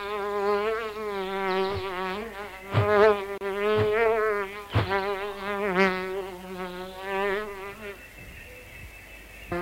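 From the first sample to the end there is a steady crackle, a fine fizz that continues through the pauses as well as under the louder passages. This is an unreliable data bit. One line in the data path is marginal, so its bit is read wrong in a random fraction of samples. Each wrong sample becomes a spike of fixed size, and because the errors do not depend on signal level, the crackle persists in near silence.

At 3.38 s a gap at a join of encoded pieces opens, running to 3.41 s, about 32 ms dropped into otherwise continuous sound. The audio was encoded in separate pieces and joined without trimming, so the encoder's start-up delay and the padding on the final frame remain at the seam. The edges of the gap are smeared by the codec, and the sound resumes exactly where it broke off.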